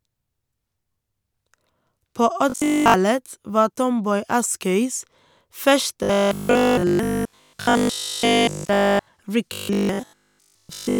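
From 2.50 to 2.94 s, 6.03 to 9.07 s and 9.53 to 10.99 s, the speech turns into a rigid, metallic 50 Hz buzz. This is robotic sound from repeated short buffers. Nearly all the audio is skipped. A 20 ms fragment likely loops in its place.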